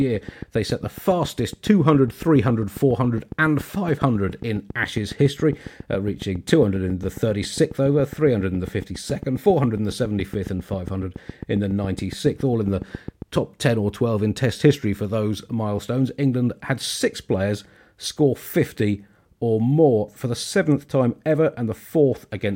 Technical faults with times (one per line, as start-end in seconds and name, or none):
0.01-13.37 train of clicks